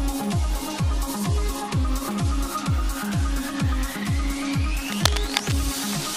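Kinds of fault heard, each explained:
cable scratch noise: A worn cable or connector likely shifted, so its contact resistance jumped rapidly, adding dense, uneven scratching from 4.78 to 5.54 s, almost as loud as the sound.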